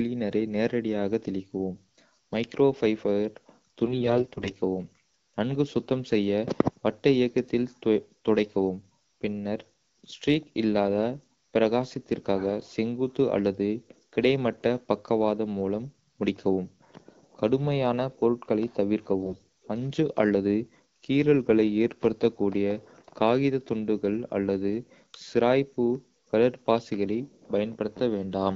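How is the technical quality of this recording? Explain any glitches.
The recording has two short glitches, both AMR bit errors, at 3.84 to 4.49 s and 19.22 to 19.40 s. Less protected bits in the AMR-WB frames (coded around 12.65 kbit/s) arrived flipped, roughly 7 percent of them. This misplaced the excitation pulses and skewed pitch, gain and spectral values, so the speech keeps its level but briefly turns hoarse, scratchy and gargly.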